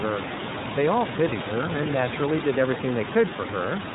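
From start to finish the speech carries iLBC codec damage, plainly audible. Nothing above 4 kHz survives, and each frame's excitation is coded on its own, which gives voiced sounds a rough, slightly synthetic grain. The texture fits iLBC's 30 ms frame mode at about 13.3 kbps. That grain, and not just the missing top end, sets it apart from a simple low-pass or telephone filter. The room noise, about 8 dB below the speech, comes through coarsened too.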